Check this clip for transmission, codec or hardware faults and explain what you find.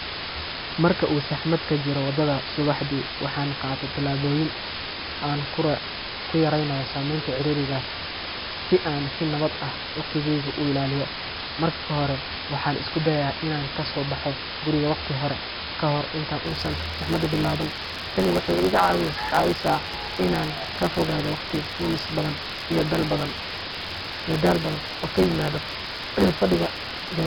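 Three faults are present: two run through the whole speech recording, and a third takes over for its last stretch.

Low bit depth with dither, throughout: a constant, even hiss sits roughly as loud as the speech itself, with no harsh distortion. Only a handful of amplitude levels are used, which fits about 4 bits, and the added dither turns the rounding error into steady white noise.

4-bit ADPCM compression, throughout: every loud syllable carries a gritty hiss that rises and falls with the speech, and sharp attacks sound roughened. Each sample is coded as a small step from a prediction, and the step size cannot grow fast enough on sudden peaks. The heavy damage fits a rate of about 44 kbps.

Block size mismatch (truncated), from 16.45 s to the end: a 100 Hz buzz appears, and the speech runs about 1.09 times faster while keeping its timbre. One stage passes on longer blocks than the next one reads, so the tail of each block is dropped, and the buzz comes from the block rate.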